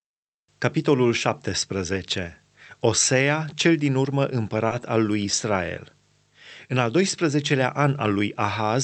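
From 4.67 to 4.82 s there is a short stall from a late packet: a packet arrived after it was due, the jitter buffer ran empty, and the receiver held the last sound for about 30 ms before resuming exactly where it left off. Nothing is lost, but the sound lingers and timing after it shifts later by 30 ms. On a spectrogram, the harmonics at that point run on flat and smeared rather than gapping; the waveform shows a stretch of near-repeating cycles. Across the clip, the call codec's high frequencies stop around 8 kHz.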